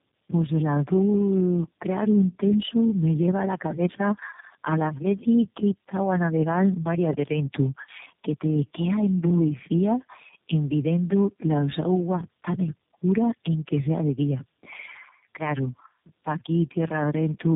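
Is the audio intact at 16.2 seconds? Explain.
No. At 16.2 s, as throughout, the speech sounds rough, muffled and warbly, with nothing above 3.7 kHz. This is tandem speech coding: iLBC, AMR-NB and G.729A run in a row, and each later coder re-encodes the previous codec's degraded output.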